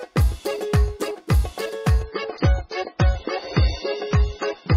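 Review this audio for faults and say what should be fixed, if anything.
From 2.03 s to the end, the adaptive stream drops to a lower bitrate, which fits a switch from MP3 at 128 to 16 kbit/s. Everything above 6.9 kHz disappears and codec artefacts rise. A spectrogram shows the treble band cut off abruptly at 2.03 s, with no gap in the waveform. Buffering further ahead or setting a higher minimum bitrate would prevent this.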